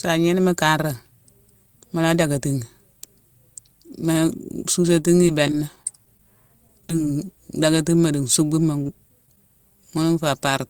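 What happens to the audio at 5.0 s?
At 5.0 s the speech is in a stretch of repeated packet loss (robotic sound), from 4.93 to 7.07 s. Short holes, none longer than 19 ms, recur throughout and are each patched by stretching the preceding sound. Unlike a single dropout, this yields sustained choppy texture.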